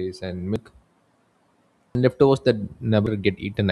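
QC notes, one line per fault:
0.56 s, 1.95 s, 3.07 s: dropped buffer (overrun). Each is an abrupt jump ahead, roughly a tenth of a second of speech missing, likely from input samples being overwritten before capture. Unlike an underrun, no silent gap appears; the speech simply splices shut.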